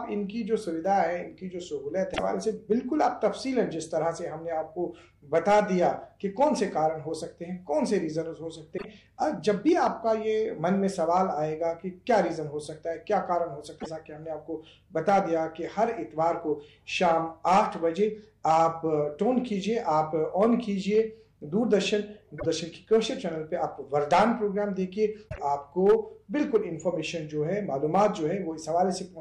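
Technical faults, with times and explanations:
2.10–2.20, 8.74–8.85, 13.76–13.87, 22.35–22.46 and 25.28–25.39 s, damaged data in a compressed stream: corrupted bytes make the decoder misread frames and lose sync while it hunts for the next frame header, so each roughly 0.1 s stretch comes out as a brief chirp, squawk, click or short hole.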